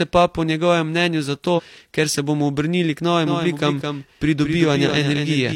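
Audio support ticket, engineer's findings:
Compressed frames skipped, 1.54 to 1.60 s, between "po njegovem mnenju zato" and "ker se bomo obrnili". About a tenth of a second of speech is missing, which fits two dropped frames of 46.4 ms each. Damaged or missing frames were not decoded.

Doubled audio track from 3.27 s to the end, starting right after "se bomo obrnili k". A second full-band copy trails by around 200 ms at about 5 dB below the original. It starts abruptly and has no room colour or decay. The likely cause is a second, slower capture path mixed into the output.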